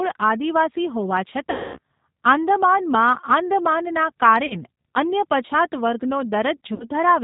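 Throughout, the speech carries G.729 codec damage consistent with 8 kbit/s coding. A spectrogram shows nothing above 4 kHz, and the sparse pulse excitation makes voiced sounds plainly rough and synthetic, with grainy, smeared harmonics instead of clean striations.

VoIP packet loss concealed by the speech codec occurs at 1.50 to 1.79 s, 4.46 to 4.56 s and 6.74 to 6.89 s, covering about 240, 40 and 60 ms of lost audio. Each time, the decoder extrapolates from its last pitch and filter into a fading buzz or coloured noise. This appears as a decaying envelope over the gap, and the sound stays weak briefly after each gap.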